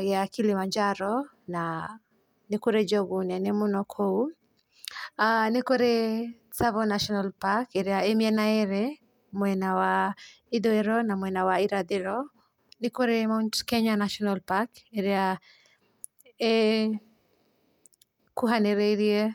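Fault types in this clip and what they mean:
No faults can be heard in this speech recording.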